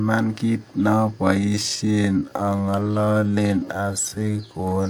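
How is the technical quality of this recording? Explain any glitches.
The recording has one clear fault: a time-stretched section. From about 1.37 s to the end, the speech suddenly slows to about 0.73 times its normal pace, while the pitch stays the same. The likely cause is software stretching the audio to fill a set length. It holds pitch by repeating short slices of sound. Those repeats overlap. So the slowed speech drags, and the pace change at 1.37 s is abrupt.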